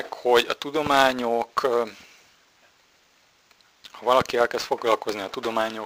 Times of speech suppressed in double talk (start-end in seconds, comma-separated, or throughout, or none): none